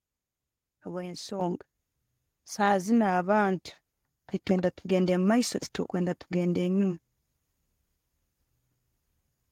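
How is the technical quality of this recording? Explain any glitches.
The recording has one glitch. At about 1.41 s the microphone volume is stepped up: the capture software judged the input too quiet and raised the device gain in a single jump of about 7 dB. Both the voice and the room background get louder at the same instant, so the change sounds like an abrupt lift rather than someone speaking up. On a waveform the envelope widens suddenly at that point, and on a spectrogram every band brightens at once, including the noise floor.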